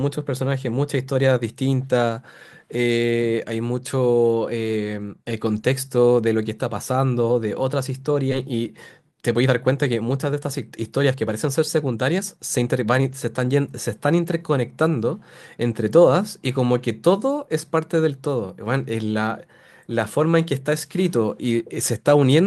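At 8.31 to 8.33 s the speech makes a skip ahead. About a second of audio is lost, with no fill. Playback jumps straight to later speech that was already queued. The two sides butt together almost seamlessly.

Right after, from 8.35 to 8.65 s, comes a jitter buffer speed-up. Speech runs about 23% fast as the receiver trims tiny pitch-period slices, roughly 70 ms in total. A second one, from 9.11 to 13.11 s, runs about 13% fast and removes around half a second. The pitch stays the same, but the speech sounds hurried.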